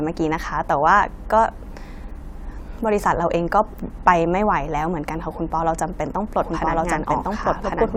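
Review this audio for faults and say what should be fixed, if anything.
A second copy of the signal was likely mixed in from a slower capture path or a misaligned edit. From 6.41 s to the end, this doubled audio track trails about one second behind at roughly equal level, dry and full-band, starting abruptly. To prevent it, route each source once and check edits for stray overlapping copies.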